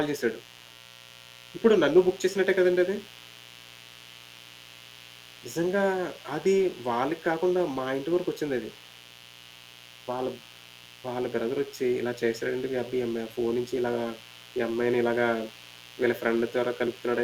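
A mains buzz runs through the whole recording, sitting roughly 25 dB below the speech. Sharp switching spikes recurring twice per 60 Hz cycle fill the spectrum with harmonics up to several kHz, giving a constant raspy edge rather than a smooth hum.

From 4.11 to 11.79 s, 12.11 to 14.77 s and 16.35 to 17.17 s, a faint echo leak trails the speech by 319 ms, far below the direct signal. It is likely a far-end loudspeaker's output reaching its microphone past an echo canceller that left residue.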